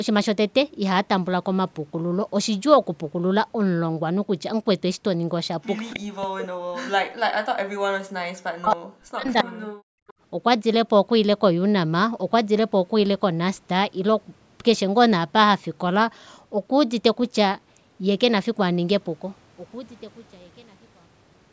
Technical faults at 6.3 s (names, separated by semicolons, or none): speech suppressed in double talk